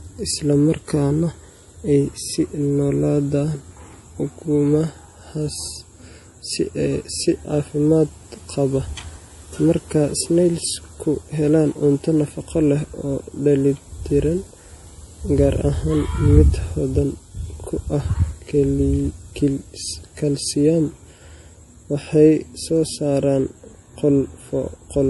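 A low-bitrate encode, likely MP3 compression at around 48 kbps, runs throughout the speech, removing everything above 11.5 kHz and dropping weak frequency detail frame by frame. Sibilants turn swirly and metallic, consonant attacks smear, and the whole sound has a plainly audible watery quality.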